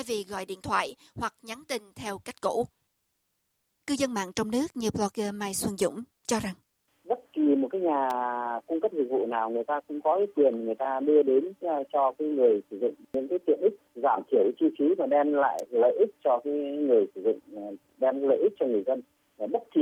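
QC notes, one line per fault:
8.10 s and 15.59 s, electrical switching spike: two isolated sharp snaps, each only a few milliseconds long and peaking at about -20 dBFS, sit on top of the sound rather than interrupting it, likely arcs from a nearby switch or motor coupling into the line, unlike dropouts or codec glitches.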